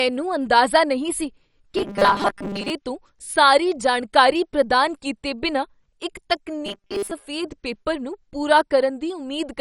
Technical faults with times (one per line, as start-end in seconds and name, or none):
0.00-9.61 MP2 compression
1.77-2.70 robotic sound from repeated short buffers
6.66-7.12 robotic sound from repeated short buffers